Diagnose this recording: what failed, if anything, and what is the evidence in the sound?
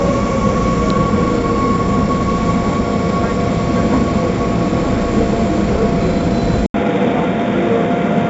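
A gritty hiss rides every loud sound throughout, with nothing above 7.7 kHz. This is heavy 4-bit ADPCM compression at the codec stage, which fits 64 kbps; its coarse step predictions leave level-following noise.

At 6.66 s the sound drops out for 80 ms, then turns duller to the end, with nothing above 3.8 kHz, new noise roughly 35 dB down, and no level change. The input was likely switched to a poorer device at the driver stage.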